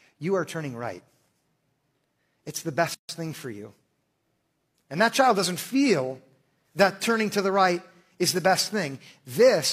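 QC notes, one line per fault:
2.94–3.09 s, gap at a join of encoded pieces: the speech drops into a silence of about 146 ms, with edges smeared by the codec, then resumes exactly where it left off, just before "thing for you". Two separately encoded pieces were joined without trimming, so the first piece's padded final frame and the second piece's start-up delay of silence both remain at the seam.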